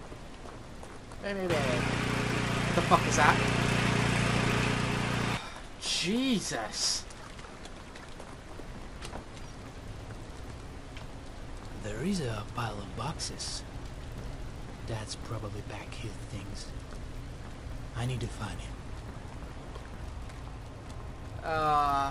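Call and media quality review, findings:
Buzz at 50 Hz throughout, only while sound is present; no buzz in silences. Resampler restarted on every block: each block converted separately, likely 24 kHz to 48 kHz in 20 ms blocks, leaving an edge error every block.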